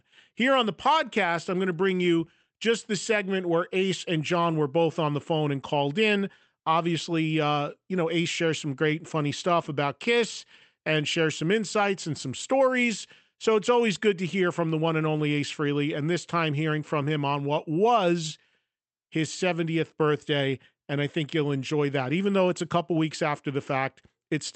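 No technical faults are audible anywhere in this recording.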